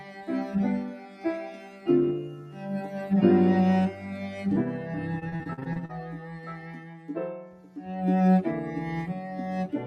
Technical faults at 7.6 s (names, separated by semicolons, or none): noise suppressor applied to music or sounds; sound cut by the noise suppressor